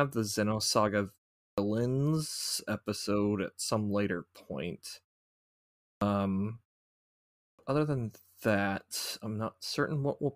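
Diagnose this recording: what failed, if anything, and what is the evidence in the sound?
The playback stage failed with a clipped start after a pause. Speech resumes abruptly out of silence at 1.48 s, 5.92 s and 7.5 s, just before "other than that". Each onset loses roughly 85 to 100 ms. The pauses before them last about 0.4 s, 0.95 s and 0.9 s. The output device sleeps during silence and needs that time to wake and relock, so the first sounds vanish.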